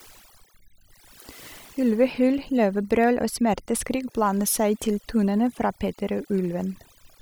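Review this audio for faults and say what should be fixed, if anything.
The background drops and breaks up into twinkling specks throughout. This is overdone noise removal: the reduction was set so strong that bands near its noise estimate get pulled down or gated off, taking quieter speech detail with them. To prevent it, use a gentler reduction amount and check the result against the original.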